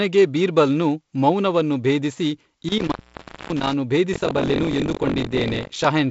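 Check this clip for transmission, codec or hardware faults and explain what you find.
Two faults are audible in this speech clip, both hardware-side, over a G.722 wideband telephone path. That path's band stops near 7.7 kHz, and its slightly noisy lower band fits the 48 kbit/s mode.

Intermittent contact runs from 2.68 to 3.73 s, right after "ಬೀರ್ಬಲ್ನು ಮೌನವನ್ನು ಭೇದಿಸಿ". A loose plug or cable opens briefly. The signal drops out for about 0.58 s. Crackles mark both edges, and faint hiss remains while the line is open.

Buffer tearing runs from 4.12 to 5.86 s. The writing program and the reading hardware have drifted, so they cross inside each period. About a fifth of every buffer replays audio roughly 40 ms old, with hard joins. This gives a robotic 46.9 Hz rattle, which fits a 1024-sample buffer.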